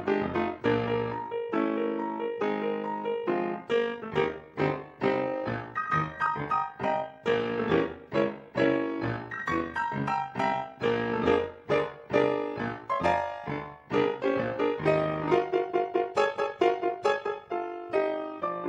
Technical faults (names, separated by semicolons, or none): overlap-add ripple